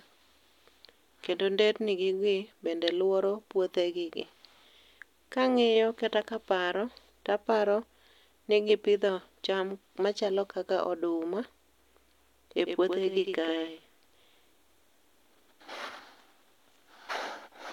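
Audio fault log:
12.65 s to end, doubled audio track: from here the speech gains an abrupt, flat second copy trailing about a tenth of a second behind, roughly 5 dB quieter, with no reverb tail or room colour, likely a second capture path or out-of-step edit layering two copies.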